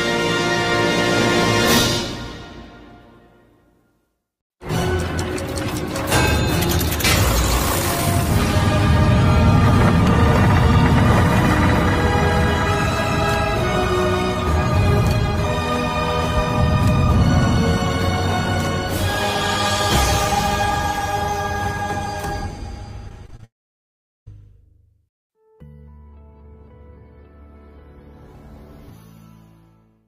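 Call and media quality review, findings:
Repeated packet loss (robotic sound), 23.09–23.45 s: network losing packets, concealment patching five short holes up to 24 ms. About 27% of span synthesized, so choppy texture with pieces missing.

Long network dropout, likely, 23.45–24.28 s: stream stops arriving. Brief fading concealment, then about 0.77 s silence. Audio resumes later with that section gone.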